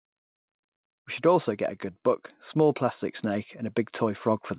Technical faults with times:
2.54-4.59 automatic gain rising

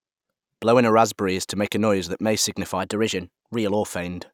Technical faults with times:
2.80-3.70 drift correction step

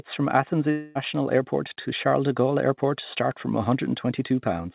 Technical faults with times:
0.71-0.98 long network dropout

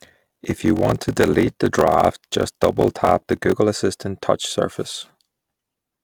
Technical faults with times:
0.00-3.54 block size mismatch (padded)

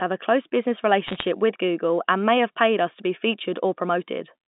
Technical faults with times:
1.06-1.25 bit errors on a digital phone line

